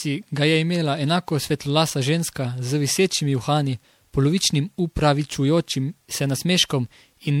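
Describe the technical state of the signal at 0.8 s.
At 0.8 s the speech has the swirly, smeared, hollow quality that runs through the whole clip, with blurred consonant attacks. That points to generation loss, likely from several passes through an MP3 codec at a rate near 96 kbit/s, each requantising on a shifted frame grid. The damage goes beyond what a single encode at that rate would cause.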